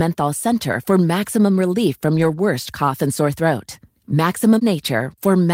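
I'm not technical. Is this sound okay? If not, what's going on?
No. Between about 2.11 and 2.37 seconds, just after "center for maximum relief" and before "cough and sore throat", the speech turns briefly rough and noisy, though nothing drops out. This is a lost packet rebuilt from error correction. A few pieces of the audio went missing in transit, but each following piece carried a small, lower-quality backup copy. The player used those backups to fill the hole, about 140 milliseconds' worth, so there's no silence, just a short grainy patch.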